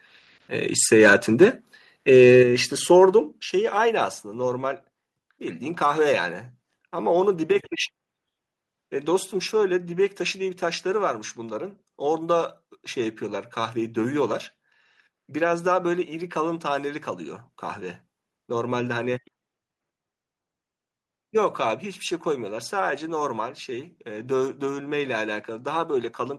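From 2.15 to 2.4 s, microphone overload flattens the loudest peaks into a harsh crackle. The input was likely set too high, driving peaks about 2 dB past the converter's limit. At 2.43 s the level drops abruptly by about 6 dB, voice and background together. This is likely the call software stepping the microphone volume down. From 3.01 to 3.03 s, a brief crackle marks another likely overload, with peaks pressed flat at the converter's limit. At 3.45 s a second step-down cuts the level by about 4 dB, again likely an automatic gain reduction.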